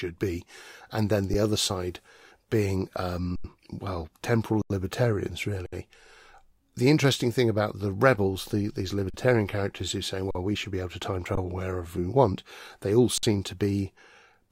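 Speech with eight underruns with held sample, at 1.34 s, 3.36–3.44 s (between "other side being" and "well temporal libertarians"), 4.62–4.70, 5.66–5.73, 9.10–9.14, 10.31–10.35, 11.35–11.37 (after "be able to time") and 13.18–13.23 s. The output buffer ran dry, and the converter froze on its last value, so the sound flattens out for 8 to 85 ms. Nothing is skipped, and playback picks up where it stopped, so the restarts come in more softly than a clean cut. The 85 ms gaps fit a 4096-sample buffer at 48 kHz.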